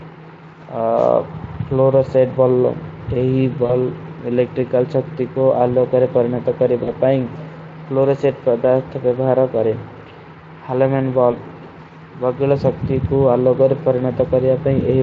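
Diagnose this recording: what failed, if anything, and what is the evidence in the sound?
The network stage dropped packets, giving VoIP packet loss concealed by the speech codec. At 3.65–3.73 s, 6.83–6.91 s and 11.31–11.37 s the sound smears into a short, fading buzz or coloured noise. The Speex decoder extrapolates its last pitch and filter, ramping gain down, then recovers.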